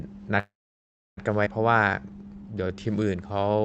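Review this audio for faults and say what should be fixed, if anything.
A call audio freeze runs from 0.39 to 1.19 s. The speech stops, the last sound carries on briefly as a fading buzz, then about 0.67 s of silence follows before speech resumes where it left off. This is likely packets stalling and the jitter buffer running dry. A steadier network path or a larger jitter buffer target would prevent it.

A skip ahead occurs at 1.45 to 1.48 s. Playback jumps forward with only a tiny gap, and roughly half a second of speech is lost. The two sides are spliced almost directly, which is typical of audio discarded when the buffer overflowed with later packets already queued. Smoother delivery, without bursts after a stall, would prevent it.

A jitter buffer slow-down runs from 1.73 s to the end. The speech plays at about 86% speed at unchanged pitch, with stretched sounds, as the receiver repeats pitch periods and pause fragments to rebuild its reserve. 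Keeping the buffer from draining would prevent it.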